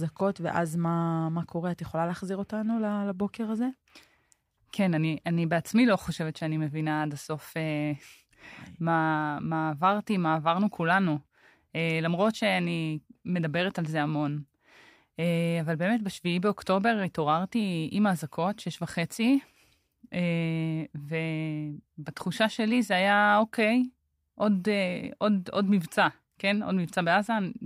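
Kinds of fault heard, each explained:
No technical faults can be heard anywhere in this speech recording. There is nothing here to list or explain.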